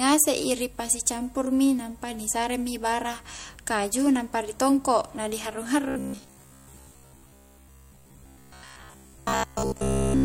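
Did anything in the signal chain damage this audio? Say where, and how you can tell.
Yes. Robotic sound from repeated short buffers runs from 5.88 s to the end, a rigid metallic buzz near 66.7 Hz riding over the speech. At the driver or buffer stage, a 15 ms chunk was likely replayed to cover missing input, repeating most of the audio.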